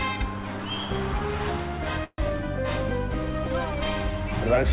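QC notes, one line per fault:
2.04 to 2.20 s, call audio freeze: the last sound smears into a fading buzz, then about 40 ms of silence, likely because delayed packets left the jitter buffer empty. Nothing's lost; playback just resumes late, under the call's 4 kHz ceiling, which fits G.711.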